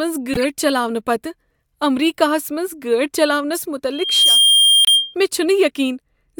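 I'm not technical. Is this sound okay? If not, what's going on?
No. In several places the decoder received audio packets with some of their data scrambled and played them anyway. Each damaged frame comes out as a short squeak or burst of noise. This corrupt frame decoded fault is heard at 0.34–0.45 s, at 3.54–3.65 s just after "امریکہس منٛز گٲڑۍ", and briefly at 4.85–4.89 s.

There is also a loudspeaker feedback squeal. A microphone picked up the speaker it was feeding, and the sound looped round and round. A single high whistle near 3.2 kHz swells up over about a third of a second and stays a little louder than the speech from 3.92 to 5.15 s.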